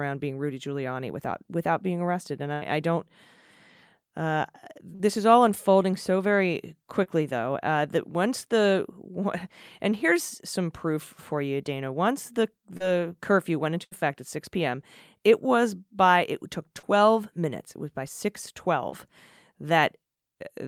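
At 2.53 s a burst of packet loss removes about 80 ms of the speech. The receiver holds the last sound and fades it, so the waveform shows the held sound shrinking in amplitude, and the spectrogram a smeared, dimming band before the speech picks up further on.

Short concealed packet loss follows at 4.95, 7.03 and 12.77 s. Each patch of 20 to 40 ms is filled by carrying the previous sound forward, heard as a quick smear or wobble. On a spectrogram the harmonics briefly blur.

A second burst at 13.84 s drops another 80 ms in the same way, with another fading held segment.

Further short concealed losses occur at 16.79 s, where the patch also stretches the audio slightly, and at 18.90 s. Both leave similar small smudges.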